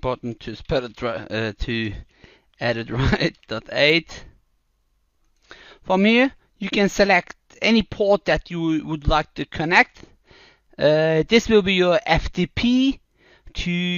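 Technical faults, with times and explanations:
No technical faults can be heard anywhere in the recording.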